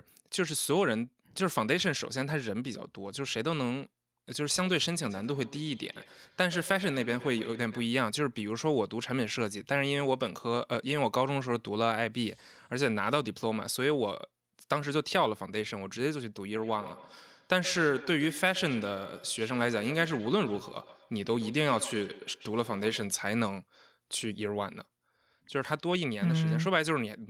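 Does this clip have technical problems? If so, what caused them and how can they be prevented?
Yes. Feedback echo between two devices runs from 5.02 to 7.95 s and again from 16.56 to 23.16 s. A second device plays the speech back into the microphone, so it returns roughly every 150 ms, peaking about 15 dB below the speech. Muting all but one device in the room, or using headphones, prevents it.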